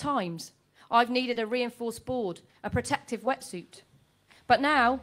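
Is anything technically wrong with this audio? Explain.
Yes. There is one short concealed packet loss, from 1.33 to 1.37 s. About 20 ms of audio never arrived in time. The receiver filled the gap by extending the preceding sound, repeating its periodic pattern or shaping noise to match, and then cross-faded back into the real signal. It is heard as a brief smear or wobble. On a spectrogram, the harmonics or noise texture look frozen and copied across that sliver. In the waveform, a repeated cycle is followed by a soft join.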